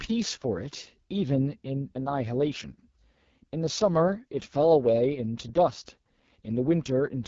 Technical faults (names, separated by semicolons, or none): AMR wideband (HD Voice) codec